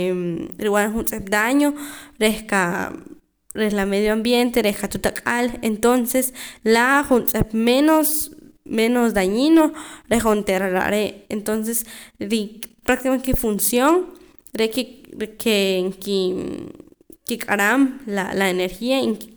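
A speech recording with no technical faults to be heard anywhere in the signal.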